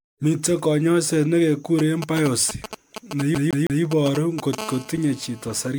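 The whole recording has a swirly, smeared and hollow quality. Consonant attacks are blurred, and nothing remains above 19.9 kHz. The likely cause is generation loss. The speech seems to have been decoded and re-encoded as MP3 around ten times, each pass near 135 kbit/s. Every new encode quantises again on a shifted frame grid. Noise and spectral holes pile up. The result sounds worse than a single encode at that bitrate would.

From 1.79 s to 4.55 s, a galloping dit-dit-dit pattern of short buzzes runs under the speech. These are GSM signalling bursts. A nearby 2G phone is exchanging brief groups of radio bursts with the network, as happens before a call or message arrives. The audio circuit rectifies them. Each buzz carries the 217 Hz burst rate. The pattern sits only a little below the speech level.

From 3.35 s to 3.83 s, the sound stutters fast and evenly. One 160 ms stretch plays three times, with a short mute at each jump. 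This is a CD stuck on one turn. A scratch throws the laser back one track at the same spot on each rotation. The same slice repeats before playback moves on.

From 4.58 s to 5.69 s, a hard, raspy buzz at 217 Hz appears, rich in harmonics and unrelated to the speech. This is GSM phone buzz. The phone has moved into a call and now transmits bursts steadily, 217 times a second. The audio circuit rectifies each radio pulse into a click, and the clicks merge into the buzz. It sits about 17 dB below the speech and stays steady throughout.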